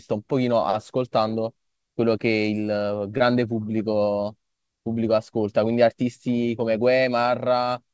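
A short concealed packet loss occurs at 3.18 to 3.21 s in this speech. About 20 ms of the call audio failed to reach the decoder in time, and the receiver covered the gap by extending the preceding sound for roughly 15 ms before blending back into the real signal. The result is a brief smear or wobble lasting a few hundredths of a second, and a quick consonant at that point may be swallowed. The call path's bandwidth stops at 8 kHz, which fits a wideband codec such as G.722.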